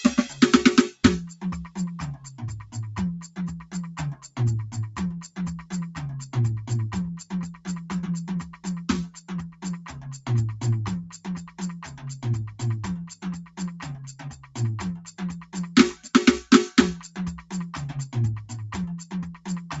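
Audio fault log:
throughout, noise suppressor applied to music or sounds: a speech-oriented suppressor stays active on this music, treating sustained tones and reverb as noise; level swings of roughly 15 dB make held material pump and thin while attacks pass through largely intact, so the mix breathes unevenly from phrase to phrase.
throughout, Bluetooth LC3 compression: plainly audible codec damage with a grainy, breathy edge on tones and a noise-filled top end, likely from LC3 at 48 kbps with 10 ms frames; the upper spectrum is sparsely coded and substituted with noise, and the band stops at about 8 kHz, consistent with the call path's bandwidth.
0.94–2.74, 3.28–4.36, 5.28–5.71, 8.46–10.26, 11.03–12.05, 13.09–16.06, 17.03–17.51, 19.04–19.70 s, sound cut by the noise suppressor: in each span, sustained and decaying parts sink by about 11 to 12 dB at their deepest, with tails cut short while onsets survive. 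Affected time per span runs from roughly 150 ms to 1.5 s, longest in 13.09–16.06 s, where the suppressor judges held sound as noise and gates it down.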